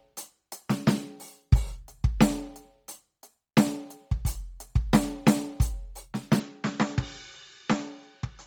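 From the start, the music has a grainy, breathy sheen over its upper range. This is heavy codec damage, likely from Bluetooth LC3 compression at a rate that fits around 32 kbps, working in 10 ms frames. The encoder discards much of the upper spectrum and fills it with shaped noise. Unlike simple low-pass band limiting, the top still reaches about 20.2 kHz, but as synthetic fizz rather than real detail.

At 6.39 s the sound suddenly turns duller and boxy and stays that way to the end. This is likely an input switched to a poorer device. Nothing above about 7.4 kHz survives, the level drops by a few decibels, and a faint new noise floor appears well below the music. There is no silence at the switch. What separates this from codec degradation is the abrupt, lasting change in tone, level and background at one instant, rather than artefacts spread evenly across the whole clip.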